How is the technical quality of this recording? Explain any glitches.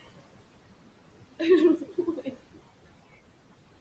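The recording has two glitches, both from the noise suppressor: artifacts running through the whole clip, and one spot where it ate into the speech.

Noise suppressor artifacts run from start to finish. The suppressor pulls down each frequency band it judges to be steady noise, frame by frame, cutting the background by about 20 dB. The room noise, which sits only about 13 dB below the voice, gets dragged in and out as the speech starts and stops. You hear it dip in the gaps and come back under the talking.

Speech cut by the noise suppressor happens between 1.78 and 2.35 s. Here the suppressor mistook parts of the speech for noise and turned them down along with the background, by about 15 dB at the deepest point. Altogether roughly 300 ms is affected. Those bits sound swallowed and faint. The upper band stops at 8 kHz, which fits a 16 kHz call path.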